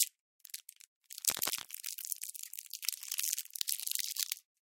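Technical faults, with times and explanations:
1.28–1.68 s, cable scratch noise: dense, uneven rustling bursts only slightly quieter than the sound, likely a worn connector shifting, which is rougher and more clustered than separate clicks.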